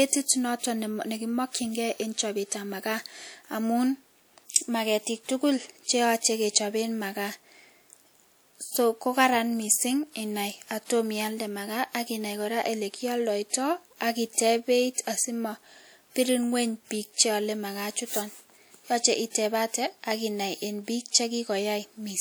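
At 13.50 s a transform codec spread its quantisation noise across a whole block ahead of a sharp attack, so noise meant for the loud onset leaked into the quiet before it. The result is pre-echo: about 37 ms of hiss, then a softened, smeared attack at 13.53 s.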